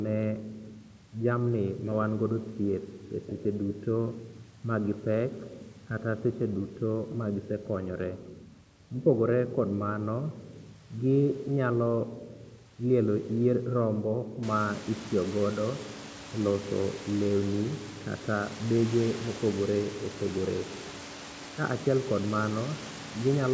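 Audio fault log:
No technical faults detected.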